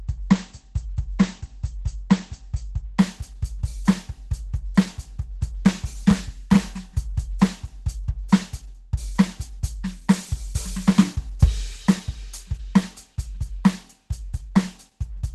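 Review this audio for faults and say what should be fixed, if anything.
The music shows Opus compression throughout, likely from a very low bitrate such as 12 kbps. Nothing remains above about 12 kHz, and tones sound grainy, muffled and hoarse because the encoder has switched to hybrid mode and is filling bands it cannot afford to code. To prevent this, encode at a much higher bitrate so Opus stays in full-band music mode.

Dropped samples cause a single sharp click at 1.64 s. The waveform jumps forward where a couple of samples are missing, which produces a thin vertical line across the spectrum. The cause is likely a buffer or stream handoff error. To prevent it, check the capture and transfer chain for buffer underruns and use adequate buffer sizes.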